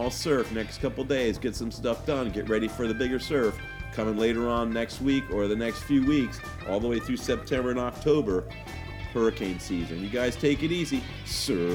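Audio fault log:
No faults are audible; the signal stays steady and continuous throughout, with nothing disturbing its level, timing or tone.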